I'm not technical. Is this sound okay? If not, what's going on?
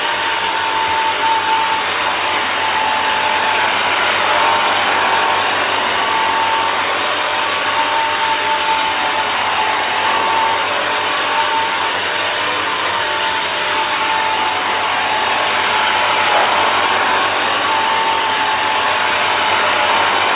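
Yes, this sound is okay: it came through an ordinary phone-style call connection that is working as it should, and the only thing you may notice is that it sounds a little narrow, like a phone line, because that kind of connection carries nothing above about 4 kHz.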